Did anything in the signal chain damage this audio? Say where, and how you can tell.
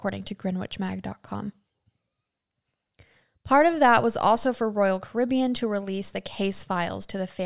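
No, there's nothing here that points to the signal chain having damaged this speech at any stage along the way.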